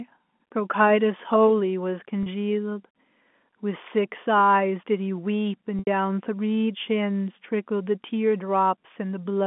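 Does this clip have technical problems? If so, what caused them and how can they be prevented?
Yes. Packet loss with pitch repetition occurs at 2.23–2.26 s (30 ms) and 5.79–5.87 s (80 ms) on this G.711 telephone line, consistent with dropped 10 ms packets. The receiver loops the last pitch period. The short gap becomes a brief buzzy hold, and the longer one fades to silence before a cross-fade. On a spectrogram the harmonics run flat and unchanging, while the waveform shows identical repeating cycles decaying toward zero. A larger jitter buffer, forward error correction, or a less congested network path would prevent it.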